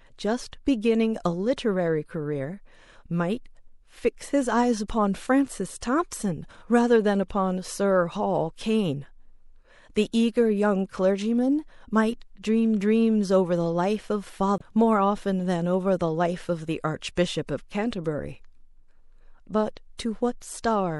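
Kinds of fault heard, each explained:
MP3 compression: throughout the speech the treble is cut off and the sound has a watery, swirling quality as quiet frequency detail flickers in and out between frames; the damage is plainly audible and points to low-bitrate encoding, which fits about 64 kbps MP3, the likely cause.
Damaged data in a compressed stream: at 14.57 to 14.62 s a short glitch breaks the speech, where the decoder hits corrupted bytes, misreads the frames there, loses sync and has to find the next valid frame header before playback resumes.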